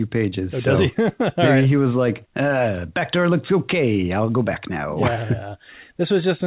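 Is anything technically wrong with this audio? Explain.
No, nothing in this speech clip points to a technical problem. It has the narrow, telephone-like sound of a call path with nothing above 4 kHz, which fits a G.711 A-law connection at 64 kbps.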